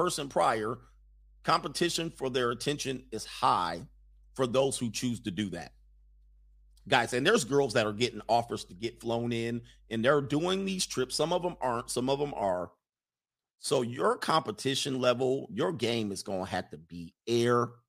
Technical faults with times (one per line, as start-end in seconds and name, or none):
0.00-12.52 mains hum